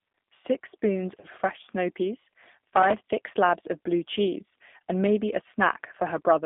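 G.729 codec damage runs throughout: the speech is rebuilt at 8 kbit/s from a vocal tract filter and sparse pulses, confined to 200 Hz to 3.6 kHz, and sounds plainly rough and synthetic. VoIP packet loss concealed by the speech codec occurs from 1.20 to 1.27 s: about 30 ms went missing, consistent with a single lost packet, and the decoder stretched its last sound into a fading buzzy tone or coloured noise that stays weak briefly afterwards.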